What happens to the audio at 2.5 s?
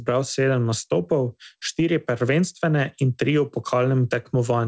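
Nothing goes wrong at 2.5 s: the speech carries on intact there, with the usual band limit of the call path, nothing above 8 kHz, which fits a wideband codec such as G.722.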